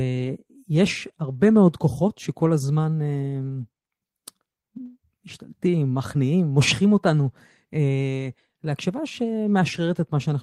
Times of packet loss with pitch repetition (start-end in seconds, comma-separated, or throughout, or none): none